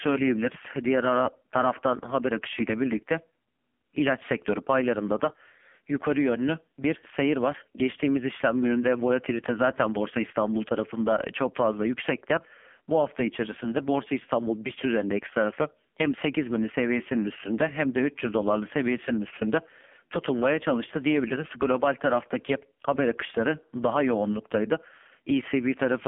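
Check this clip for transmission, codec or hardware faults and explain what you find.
One fault runs through the whole clip: the speech has passed through an AMR narrowband mobile codec. Nothing above 3.6 kHz survives, and the usable band sits roughly between 200 Hz and 3.5 kHz, like a phone line. The codec rebuilds the speech from a vocal-tract model driven by sparse pulses in each 5 ms. The damage is heavy, with a buzzy, synthetic texture that points to one of AMR-NB's low-rate modes, around 5.9 kbps.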